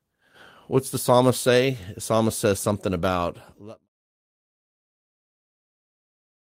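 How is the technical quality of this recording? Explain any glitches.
The speech signal has no technical glitches, and the only level change is a smooth, deliberate fade-out that begins around 3 s and is complete by 3.89 s, with no click or hard edge.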